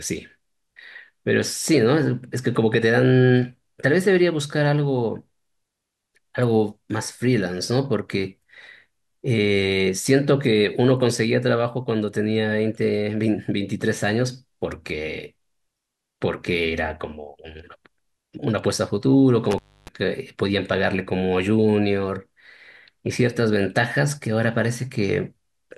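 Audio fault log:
19.51–19.88 s, intermittent contact. The speech drops out abruptly for about 0.29 s inside this span. A brief crackle marks the break and the return. While the signal is gone, faint hiss remains. This is the sound of a loose plug or cable connection parting for a moment. The contact scrapes as it opens and closes, which causes the crackle. The gap holds only the residual noise of the path beyond the break.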